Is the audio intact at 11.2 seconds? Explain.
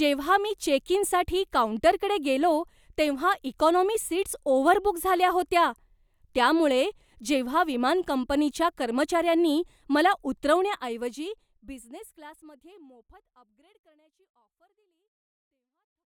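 Yes, the speech is intact at 11.2 seconds; the level is gently dropping there as part of a smooth editorial fade-out, with no click, gap or other damage.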